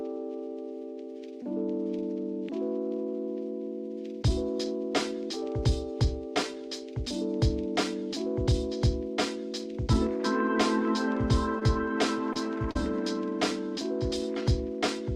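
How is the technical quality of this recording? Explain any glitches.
Three brief dropouts in the last few seconds show short concealed packet loss. They occur at 11.59 to 11.63, 12.33 to 12.37, and 12.71 to 12.77 s. Late audio packets left gaps, and the receiver extended the preceding sound to cover 16, 20 and 40 ms. Each one is heard as a quick smear or wobble.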